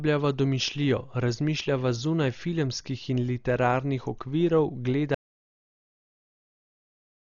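From the start the speech sounds dull and band-limited, with nothing above about 6.9 kHz, and a rough, fluttering noise clings to voiced sounds. This points to heavy Dolby Digital compression, likely at a low rate around 40 kbps, where the encoder narrows the bandwidth and starves many frequency lines of mantissa bits, leaving the decoder to fill them with dither noise that smears around tonal components.

At 5.15 s the audio drops out to silence and stays silent to the end. The gap is silent, with no room tone underneath, which is the signature of an audio dropout to silence. The likely cause is that the input was lost, through a disconnected source, a broken link or a mute, while the recorder kept writing empty samples, so everything after that point is missing.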